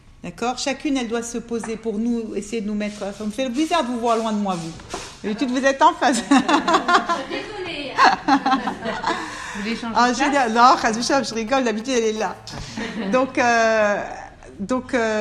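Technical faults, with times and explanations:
10.39–12.05 s, GSM signalling bursts: a nearby 2G phone is handshaking, so the circuit rectifies its radio pulses into galloping ticks and 217 Hz buzzes, roughly 15 dB under the audio.
12.17–13.85 s, GSM phone buzz: now the phone is in a call, transmitting steadily at 217 bursts a second, giving a hard, raspy, harmonic-rich buzz about 27 dB down.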